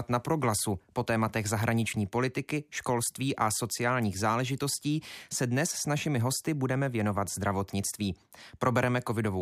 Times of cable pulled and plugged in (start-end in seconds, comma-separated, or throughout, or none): none